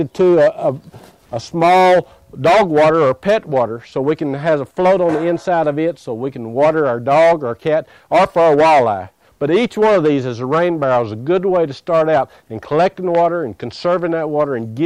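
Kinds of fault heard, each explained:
Loud pop: at 13.15 to 13.17 s a single sharp pop stands out, a few decibels above the surrounding level, while the sound continues beneath it without a break. A brief step or pulse of voltage has been added on top of the signal, likely from a plug, switch, static discharge or driver glitch. The stages after it shape that jolt into a short thump lasting about 20 ms before it dies away.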